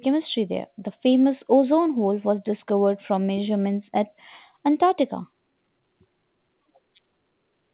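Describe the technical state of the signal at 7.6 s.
At 7.6 s the speech is intact, with no fault, and like the rest of the call path it carries nothing above 4 kHz, which fits a narrowband telephone codec such as G.711.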